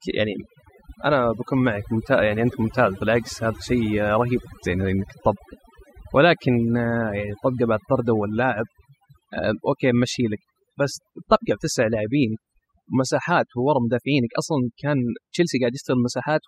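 From start to finish the background sinks to near silence scattered with twinkling specks. This is overdone noise removal: the reducer, set far too strong, cuts individual frequency bands near its noise estimate, and quieter parts of speech vanish with them.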